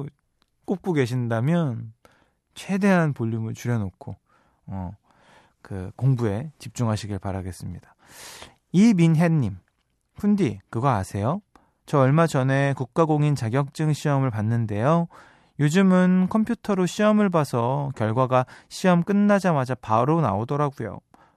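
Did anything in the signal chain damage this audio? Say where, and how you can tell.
No, nothing in the signal chain damaged this audio.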